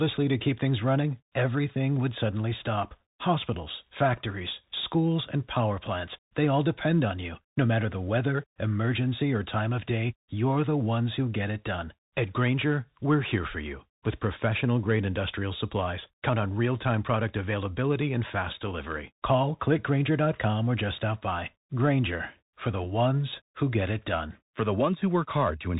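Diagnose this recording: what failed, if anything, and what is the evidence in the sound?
Bluetooth CVSD headset codec, throughout the speech, at the codec stage: nothing passes above 3.8 kHz, s sounds turn scratchy, and a granular hiss sits underneath. One-bit up-or-down steps fitting a 64 kbit/s stream cannot track loud high content, so it distorts audibly.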